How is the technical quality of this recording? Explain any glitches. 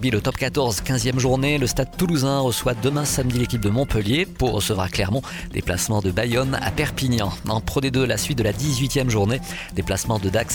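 No glitches or faults heard.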